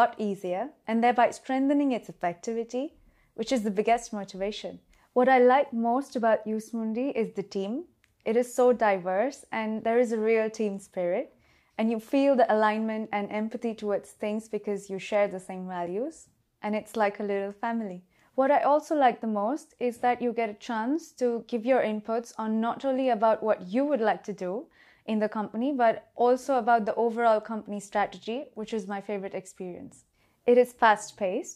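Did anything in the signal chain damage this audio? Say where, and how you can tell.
No, nothing in the signal chain has left an audible mark on this audio. I can't point to any stage, from the wiring through to playback, where the sound gives away a problem.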